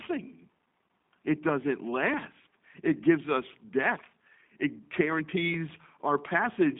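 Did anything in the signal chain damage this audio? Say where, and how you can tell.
Yes, at the codec stage, throughout the clip. Nothing passes above 3.8 kHz, the speech sits in a 200 Hz to 3.7 kHz line band, and it sounds audibly rough and synthetic. That is G.729 coding, which fits an 8 kbit/s rate, rebuilding each frame from a filter, pitch predictor and sparse pulses.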